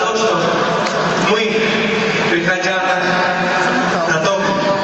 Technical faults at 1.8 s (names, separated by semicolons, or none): gain pumping